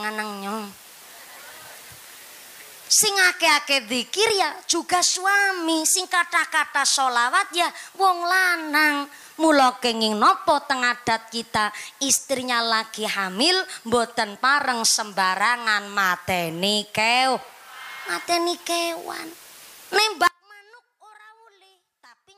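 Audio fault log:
20.27 s to end: audio dropout to a faint residue. The signal cuts off abruptly mid-flow rather than pausing or fading, and does not return before the clip ends. What remains is a faint leak of the same sound roughly 30 dB below its normal level, so the path after the break stayed live while the main feed was lost. The likely cause is an upstream break, such as a failed connection or interrupted source, with only a weak leak still reaching the input.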